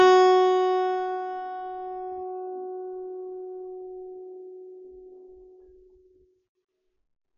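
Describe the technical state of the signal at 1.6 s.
At 1.6 s the music carries the same damage heard throughout: nothing above 7 kHz, plus a warbling, smeared texture on sustained tones, which is likely AAC compression at a low rate, around 32 kbps. A plain low-pass filter would dull it without that swirling.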